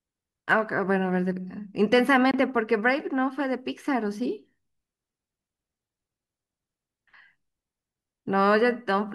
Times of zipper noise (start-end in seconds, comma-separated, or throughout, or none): none